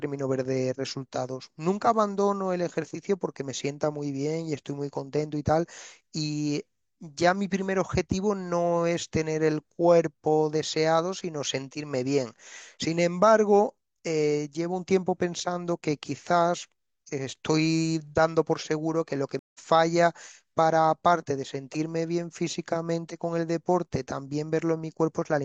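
At 19.39 s the speech drops out for about 150 ms in a stream reconnect, then resumes roughly 150 ms further on, with a fresh decoder fading in until 19.59 s.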